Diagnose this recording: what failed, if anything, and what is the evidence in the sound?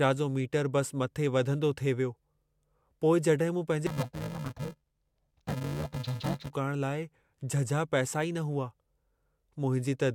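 From 3.87 to 6.50 s, sample-format conversion read interleaved audio as planar in 2.67 ms blocks. The speech sounds dull and robotic, with spectrogram stripes at 375 Hz.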